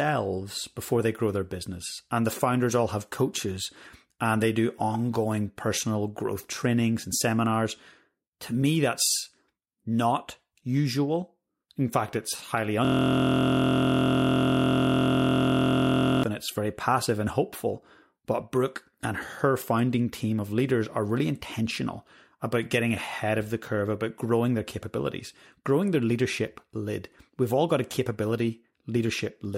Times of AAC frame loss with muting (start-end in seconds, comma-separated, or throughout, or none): none